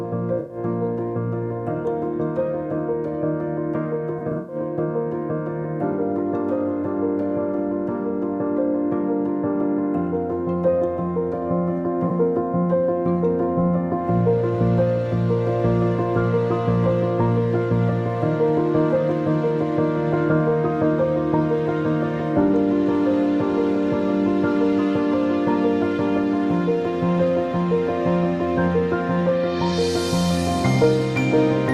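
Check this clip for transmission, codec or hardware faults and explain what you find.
There are three short holes in the audio, all AAC frame loss with concealment. At 0.39–0.57 s, around 4.19–4.56 s (scattered, longest gap about a tenth of a second) and at 12.08–12.11 s, the sound turns briefly smeared and noisy. Lost frames were likely patched from the last good spectrum.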